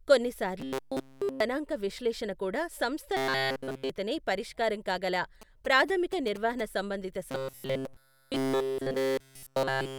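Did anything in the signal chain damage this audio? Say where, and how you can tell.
Yes. From 0.60 to 1.40 s, just before "విశ్లేషణ కూడా సంస్థ", again from 3.17 to 3.90 s, ending just before "పరిష్కారం కాగల", and from 7.31 s to the end, there is robotic sound from repeated short buffers, likely at the driver or buffer stage. The sound is rigid and metallic, with a 133 Hz buzz that fits a segment of about 7.5 ms being replayed while real audio is skipped. Here essentially all of the audio in those spans is repeats. A spectrogram shows evenly spaced harmonic lines at multiples of 133 Hz in place of normal formant movement. The waveform shows short cycles repeated over and over.

GSM signalling bursts enter through the analogue wiring from 5.42 to 6.61 s, right after "పరిష్కారం కాగల". A nearby 2G phone sending signalling bursts is picked up and rectified by the audio circuit. This is heard as a galloping pattern of short buzzes at a 217 Hz burst rate, at about 15 dB below the signal. 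The waveform shows clustered sharp spikes, and the spectrogram shows broadband vertical stripes with a comb at multiples of 217 Hz.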